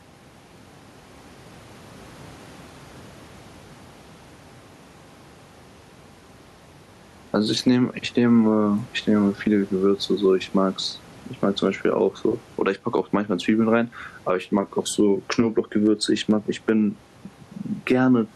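Gain pumping runs throughout. The room noise, about 35 dB below the speech, swells in every pause and ducks under each loud syllable, swinging around 10 dB. The likely cause is input gain set far too high, with a fast limiter clamping every peak and squashing the dynamics.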